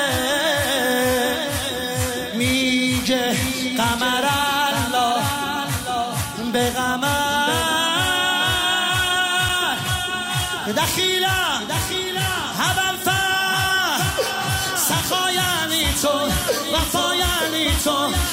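At 9.49 s the sound drops for about 5.3 ms to a block of digital silence and then resumes, with no fade on either side. The hard edges at entry and exit merge into a single tick at this length. Unlike a lone impulse click, the sample values drop to silence rather than spiking. The gap fits a 256-sample buffer that was not filled in time.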